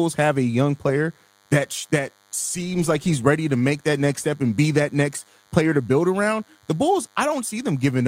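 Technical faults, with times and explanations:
Throughout, DECT cordless phone buzz: there's a thin, steady buzz sitting well under the speech, roughly 40 dB down, so it's faint but never lets up. A DECT handset or base station close to the gear fires a short radio burst every 10 ms, and something in the audio chain rectifies those bursts. That turns them into a 100 Hz pulse train, which is why you hear a 100 Hz tone with a whole stack of harmonics above it.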